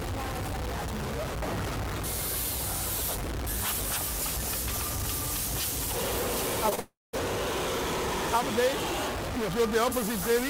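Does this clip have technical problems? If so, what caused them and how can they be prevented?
Yes. Throughout the clip there is distortion, and the quiet gaps are filled with noise rather than falling silent. The likely cause is a stuck bit: one bit of each sample, held at a fixed value by a faulty data line or converter, pushes roughly half the values off by that bit's weight and flips with the sign of small values, so pauses turn noisy. Checking the converter and its wiring with a bit-pattern test would catch this before recording.

Around 6.69 to 6.73 s and again at 6.75 to 6.79 s, the sound briefly smears and wobbles. This is short concealed packet loss: about 20 ms of audio arrived too late each time, and the receiver bridged each hole by extending the preceding sound before blending back. A larger jitter buffer or forward error correction would let these packets be recovered.

Straight after, from 6.79 to 7.15 s, the sound continues as a fading buzz or hiss and then drops to silence for about 0.19 s before returning with a piece missing. 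This is a long network dropout, likely a stretch of about 0.34 s where no packets reached the receiver, which played out its concealment until it gave up. A more stable network path, with redundancy or retransmission for the audio stream, would prevent this.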